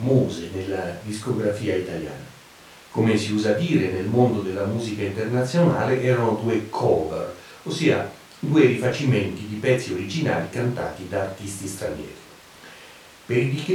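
No technical faults can be heard anywhere in the speech, so there is nothing to describe in time order.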